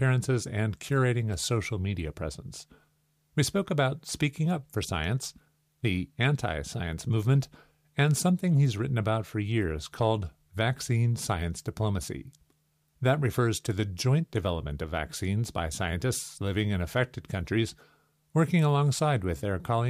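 No technical faults are audible anywhere in this speech recording.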